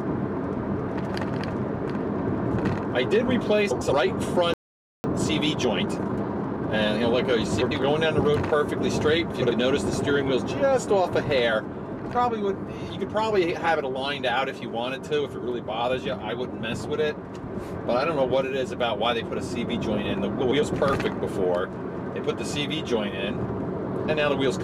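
The audio carries six short scrambles of the frames out of order kind, at 0.88–1.10 s, 2.24–2.46 s, 3.71–3.93 s, 7.61–7.83 s, 9.31–9.53 s and 20.41–20.62 s. Each lasts about 0.22 s and plays two adjacent 104.5 ms blocks swapped, which fits runs of four frames of roughly 26 ms each delivered in reverse order. The result is a brief garbled flutter. Nothing is lost in time, so the material resumes in step afterwards. At 4.54 s the sound cuts out mid-flow for about 0.5 s, a playback stall, with silence until 5.04 s, most likely because the player's buffer ran dry or its output thread was held up. From 5.04 to 7.04 s there is time-compressed catch-up: the player works off the backlog by running at 1.25 times normal speed. It does this by dropping and cross-fading small slices rather than resampling, so the pitch stays put but the passage sounds rushed until normal pacing returns at 7.04 s.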